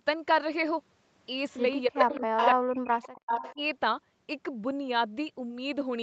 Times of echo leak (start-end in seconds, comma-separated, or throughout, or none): 1.51-1.59, 1.95-2.49, 3.06-3.55